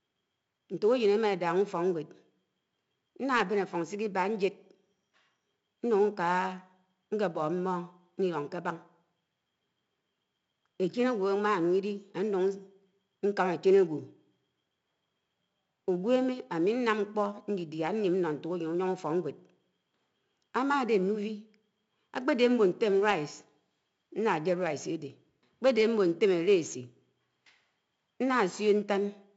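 From start to finish the speech carries 4-bit ADPCM compression: each sample is coded as a coarse step from a prediction, leaving gritty hiss that rises and falls with loudness, unlike constant tape hiss, and harsh attacks. Nothing above 7.7 kHz, which fits 64 kbps.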